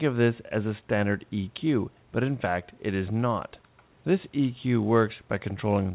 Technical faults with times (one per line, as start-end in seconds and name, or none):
none